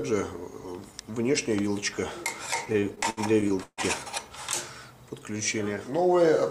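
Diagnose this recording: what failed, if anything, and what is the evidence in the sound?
The network stage failed, producing repeated stalls (stutter) between 2.65 and 3.81 s. Packets arrived late or too slowly, so the jitter buffer ran dry 11 times. The receiver held the last sound over each wait, fading it during the longer ones, up to 145 ms. About 341 ms was filled this way, roughly 30 percent of that stretch, with nothing lost. On a spectrogram the frames smear into flat, repeated columns, and the waveform shows stretched, decaying segments.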